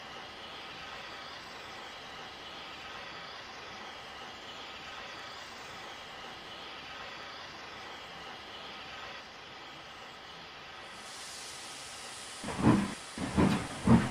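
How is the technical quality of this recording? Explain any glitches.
The recording has one recurring glitch. Clock drift buffer slips: mismatched device clocks likely force a buffer to drop or repeat a few samples, causing a click every 2.03 s from 1.13 s to 13.34 s.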